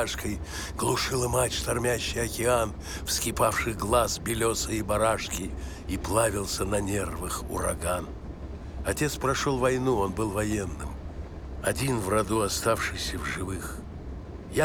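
No technical faults can be heard anywhere in this clip.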